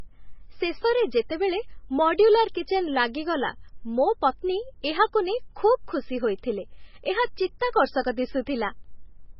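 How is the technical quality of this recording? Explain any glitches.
The technical quality is poor, with heavy compression damage across the whole recording.

MP3 compression, throughout: the speech is almost certainly the product of a starved encoder. The damage fits a very low bitrate, around 16 kbps. With so few bits, the encoder drops all content above 5.6 kHz, which leaves the speech dull and muffled. It also discards weak frequency lines that flicker on and off between frames, which gives a watery, swirling texture, metallic chirps on s sounds, and smeared consonant attacks.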